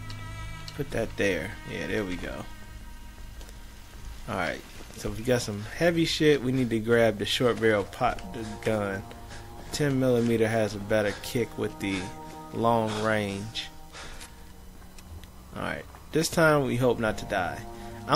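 Nothing in the recording stood out as a problem on listening.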